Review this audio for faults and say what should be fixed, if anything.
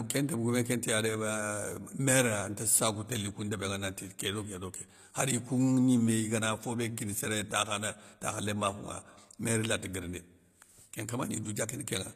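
Throughout the speech, the treble sounds bright but synthetic: s sounds come out gritty and lispy, with a metallic sheen, and nothing is present above about 14.9 kHz. The likely cause is HE-AAC compression, which fits a low bitrate around 24 kbps. The coder keeps only the lower spectrum and regenerates the top by copying lower bands upward under a coarse envelope, so the rebuilt harmonics fail to line up with the real ones. To prevent this, encode at a higher bitrate with plain AAC-LC or another codec that transmits the full treble instead of reconstructing it.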